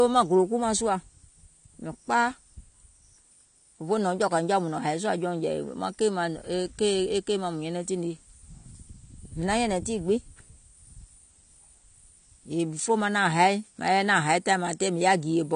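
AAC compression runs throughout this speech clip: nothing is heard above about 9.8 kHz, and the sound is dull and smeared, with a warbling, fizzy edge on sibilants. The likely cause is low-bitrate AAC-LC, around 32 kbps, where the coarsely quantised spectrum is cut off and left with gaps.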